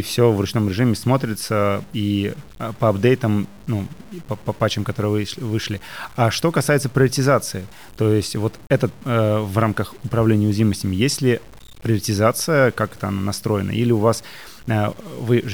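A speech recording carries low bit depth without dither from start to finish, heard as grainy distortion that tracks the voice, with quiet tails sputtering or dropping to silence. The likely cause is truncation to about 7 bits, leaving error roughly 30 dB below the signal. A waveform shows visible stair-steps, and a spectrogram shows signal-dependent hash filling gaps between harmonics.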